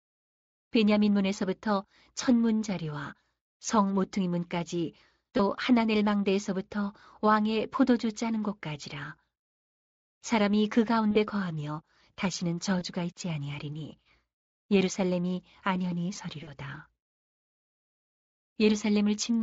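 VoIP packet loss concealed by the speech codec occurs at 5.37 s, 11.11–11.17 s, 12.79–12.83 s and 16.43–16.52 s. The Speex decoder fills each gap by extending its last pitch and filter at falling gain, so the speech briefly turns buzzy and smeared. The gaps fit one or two 20 ms frames.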